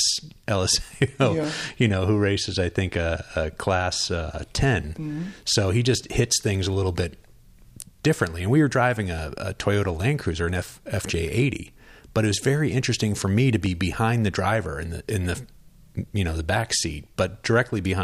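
A few samples at a time were likely dropped from the stream, each loss about 0.7 ms, so the waveform jumps straight to a later value and this speech clip gets a single sharp click at each break. These dropped samples occur at 1.44 s, just before "you know who races"; at 5.52 s, before "he just hits things"; at 13.66 s, between "interesting for me to" and "behind the driver in"; and at 17.35 s.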